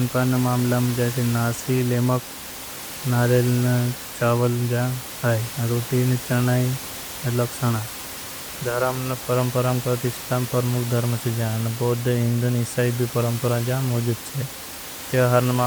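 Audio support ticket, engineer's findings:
No system fault found in the speech recording; the background room noise, about 13 dB below the speech, is part of the recording itself.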